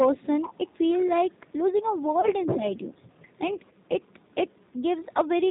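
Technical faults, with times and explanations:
Throughout: G.729 codec. The 8 kbit/s coder rebuilds speech from a filter, pitch predictor and sparse pulses, cutting everything above 4 kHz and leaving it plainly rough and synthetic.
0.16–1.52 s, 1.7–2.59 s, 2.75–4.72 s, 5.46–5.51 s: other side's voice leaking through. Likely incomplete echo cancellation lets a second voice through, faint at first, much louder around 1.7–2.59 s, then faint again.
2.21–2.29 s: VoIP packet loss concealed by the speech codec. A 20 ms gap is filled by extrapolating the last pitch and filter, giving a brief buzzy, fading smear that lingers slightly.
2.56–2.64 s: speech suppressed in double talk. With both sides active, the canceller likely turned the talker down too, producing a short dip of roughly 5 dB.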